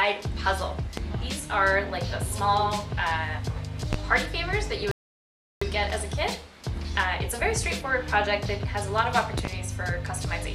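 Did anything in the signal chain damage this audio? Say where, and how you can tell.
Yes, two separate problems. First, loud pops at 0.97 to 1.01 s, 3.93 to 3.97 s, and a double pop at 9.38 to 9.49 s. Each spikes roughly 15 dB above the surrounding sound, and the audio keeps running underneath. That's an electrical pulse landing on the signal, likely from the analogue wiring side, such as a plug, a switch or static, or from a driver glitch. The downstream circuitry shapes each pulse into that sharp thump.

Second, a rebuffering stall at the playback end, from 4.91 to 5.62 s. The sound drops to silence and then picks up exactly where it left off, with nothing skipped, so about 0.70 s of dead air gets inserted. That's the player draining its downloaded buffer and waiting for more data to arrive over the network before carrying on.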